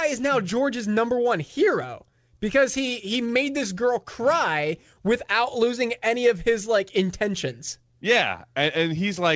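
Throughout the speech there is a faint unevenness in pacing, as if the talker briefly stalls now and then. This is clock drift between sender and receiver: the sender's clock runs roughly 4% slow, so the jitter buffer keeps draining instead of staying level.

From 0.00 to 9.02 s, repeated timing corrections appear as small, irregularly spaced hiccups and a slightly dragging tempo, about 96% of normal speed. To keep the buffer from running dry, the receiver repeatedly stretches the audio by repeating short pieces, adding around 0.3 s overall. This happens over a call path whose band stops at 8 kHz, which fits the G.722 codec.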